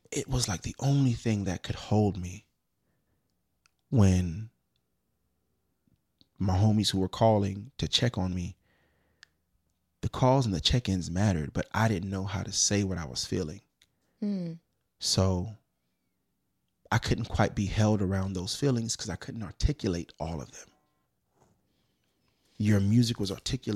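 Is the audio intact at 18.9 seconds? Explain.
Yes, at 18.9 seconds the speech plays through intact, with no audible fault at that moment.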